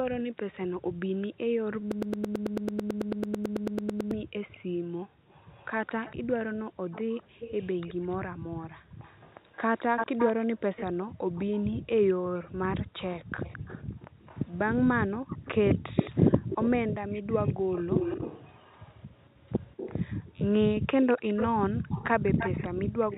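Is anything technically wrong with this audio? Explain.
Yes. Three kinds of fault can be heard in this speech recording.

Background gated by the echo canceller: the room sound drops out five times, from 0.01 to 6.85 s, 8.36 to 8.99 s, 11.07 to 12.58 s, 15.18 to 17.73 s and 21.65 to 21.87 s. The echo canceller's suppressor clamps the microphone while the far-end loudspeaker is active, pulling the background down by about 40 dB in the first stretch and about 36 dB later. The ambience vanishes abruptly and then returns, for about two seconds in total in the first stretch and a few hundred milliseconds in each later one.

Echo leak: a delayed copy of the speech trails the original by 215 ms from 1.21 to 11.45 s, at roughly 15 dB below the main speech, and again from 13.09 s to the end, louder at roughly 10 dB below. The likely cause is a loudspeaker on the other end whose echo canceller did not fully remove what its microphone picked up, so the residue was sent back. 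It sounds like a doubling of the voice behind the speech.

Broken-record loop: from 1.92 to 4.11 s, a 110 ms fragment repeats back to back about 20 times, giving a stuttering repetition in place of the intended audio. This likely comes from a stalled player, encoder or stream that kept resending the last piece of audio it held. Everything that should have played during those two seconds is lost.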